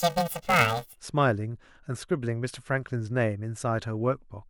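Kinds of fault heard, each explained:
Planar audio read as interleaved: from 0 to 1.0 s, each 2.9 ms block's left-then-right samples play as pairs, producing a robotic 345 Hz buzz; spectrograms show harmonic striping at 345 Hz spacing.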